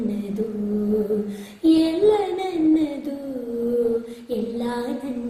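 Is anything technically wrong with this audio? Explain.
No, nothing technically wrong can be heard here.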